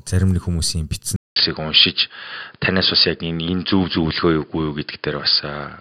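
From 1.16 s, just after "зарим нэг хүмүүсийн битсэн", the speech drops out for about 200 ms and returns duller and boxier, with nothing above 5.1 kHz and a faint new background hiss well below the voice, while the loudness stays much the same. This holds to the end of the clip. The cause is likely an input switched to a poorer device, a narrower-band microphone or headset profile that brings its own tone and noise floor.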